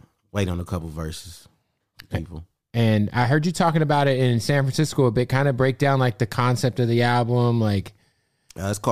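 Listening through the speech recording, nothing technical stood out at any point.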